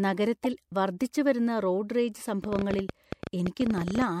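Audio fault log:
0.44–0.60 s, corrupt frame decoded: A brief garbled burst and chirp cut through the speech. Damaged compressed data was played anyway, so energy landed at wrong frequencies. The length fits several bad frames in a row. The error peaks around -20 dBFS.
2.44–4.03 s, train of clicks: Similar sharp ticks ride over the speech, about twenty of them. They arrive unevenly, averaging 14 per second. The peaks reach roughly 10 dB above the speech. The likely cause is interference or a faulty connection or power supply injecting pulses.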